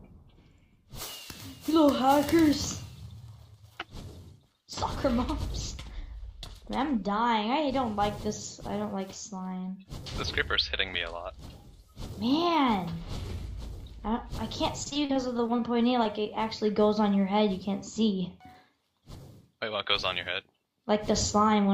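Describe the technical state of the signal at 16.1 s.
Just before 16.1 s, from 16.03 to 16.07 s, there is a short concealed packet loss. About 20 ms of audio never arrived in time, and the decoder covered the gap by extending the preceding sound for roughly 15 ms before blending back into real signal. It is heard as a brief smear or wobble. On a spectrogram, the harmonics or noise texture freeze and repeat, then soften at the seam.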